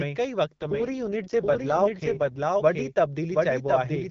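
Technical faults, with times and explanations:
Throughout, doubled audio track: every sound is followed by a second, full-band copy arriving roughly 0.7 s later at about the same loudness, so the speech seems to talk over itself in a dry, hard-edged echo with no decay or room colour. Because the copy is identical and equally strong rather than fading like a reflection, it is likely the same signal mixed in twice, once through a slower capture path or via an edit leaving two copies out of step.
0.62 to 2.40 s, AMR rate drop: the speech turns rougher, buzzier and more synthetic, yet the bandwidth stays the same and nothing drops out. The wideband coding, clear before and after, loses detail in this span, which fits the network telling the AMR-WB codec to fall from 12.65 to 6.6 kbit/s and spend the freed bits on error protection over a weak radio link. At 2.40 s the higher rate returns and the roughness clears.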